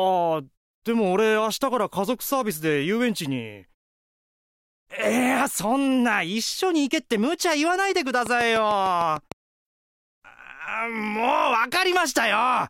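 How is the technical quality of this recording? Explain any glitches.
One glitch stands out. From 8.26 to 9.33 s a train of clicks ticks over the sound, roughly seven evenly spaced pops at about 6.7 per second, peaking around 10 dB above the signal. The likely cause is interference from nearby equipment or a faulty connection or power supply injecting a repeated pulse.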